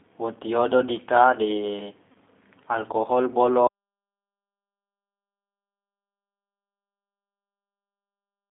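G.729 codec damage runs throughout: the speech is squeezed into roughly 250 Hz to 3.6 kHz and rebuilt from a vocal tract model with sparse pulses, so it sounds plainly rough and synthetic.

VoIP packet loss concealed by the speech codec occurs from 2.12 to 2.17 s. The decoder extrapolates from its last pitch and filter across a gap that fits three lost 10 ms frames, producing a brief fading smear of buzzy tone or coloured noise.

An audio dropout to silence begins at 3.67 s and lasts to the end. The sound cuts off mid-flow into silence with no room tone, likely because the input link or device was lost.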